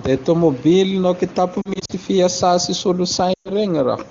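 Brief dips and warbles break up the speech from 1.61 to 1.92 s, and frames are lost again from 3.33 to 3.50 s. These are lost AMR speech frames. Radio errors corrupted frames, and the wideband decoder filled each gap by repeating its last good pitch and vocal tract settings at falling gain. In the first stretch the losses are scattered, with no gap longer than 40 ms. The clear HD Voice speech around these gaps fits a high AMR-WB rate.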